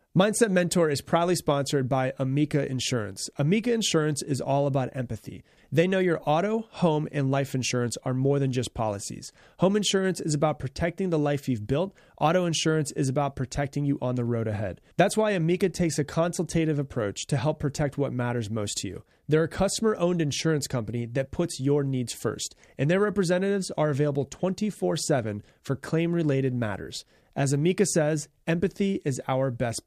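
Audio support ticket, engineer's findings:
No audible faults found in the speech recording, and no component in the chain implicated.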